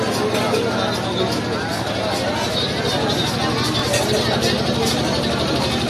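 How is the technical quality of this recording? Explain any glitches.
Two small glitches spoil it, both from overlapping chunks. At 1.77 s and again at 3.79 s, about 20 ms of audio plays twice, because each 2-second chunk starts slightly before the previous one finished. At each join you hear a quick click or stutter, spaced two seconds apart.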